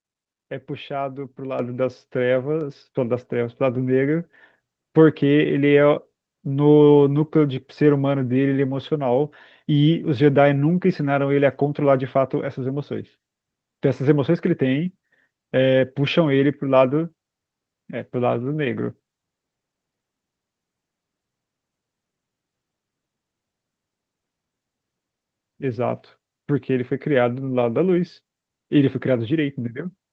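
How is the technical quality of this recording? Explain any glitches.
The recording has one clear glitch, a sudden level jump early on. The audio also carries the band-limited sound of a call codec, with nothing above about 8 kHz, which fits Opus running in wideband mode.

At 1.59 s the microphone volume is stepped up. The call software judged the input too quiet and raised the device's gain by about 8 dB in a single step. Speech and background noise both get louder at once, rather than fading up. On a waveform the envelope widens abruptly at that point. On a spectrogram every band brightens together along a vertical edge, noise floor included, beneath a hard ceiling near 8 kHz.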